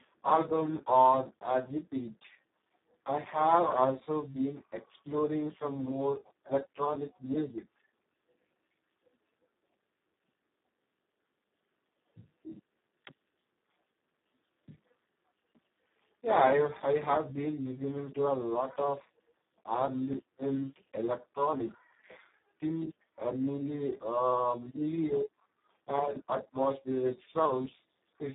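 Throughout, the speech carries heavy Speex codec damage: hoarse, noisy and buzzy at a near-vocoder level, which fits a rate around 4 kbps. Unlike simple telephone band-limiting, the excitation itself is starved, not just the 150 Hz to 3.7 kHz band, and nothing lies above 3.8 kHz.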